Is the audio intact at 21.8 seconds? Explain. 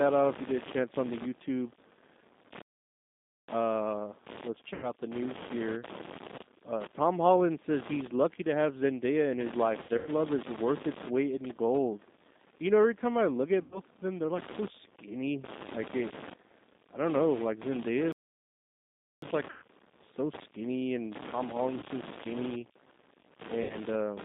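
No. From 21.79 to 21.85 s there is VoIP packet loss concealed by the speech codec: about 30 ms went missing, which fits a single lost packet. The decoder stretched its last pitch and filter into a buzzy tone or coloured noise that fades, seen as smeared, repeated harmonics with a shrinking waveform envelope.

Computer activity noise is also present: buzzing pulses, roughly 70 per second and about 15 dB below the speech, that track the computer's load rather than the sound. On a spectrogram they appear as regular vertical striations.

The G.729 codec adds plainly rough, synthetic coloration across this span. The band stops sharply below 200 Hz and above 3.7 kHz, which fits an 8 kbit/s G.729 stream.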